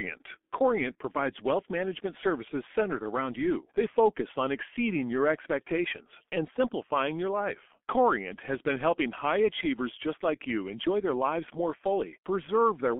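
Throughout, the speech is muffled, hoarse and band-limited to 250 Hz–3.4 kHz, with blurred consonants: heavy G.723.1 codec damage, fitting coding near 6 kbit/s.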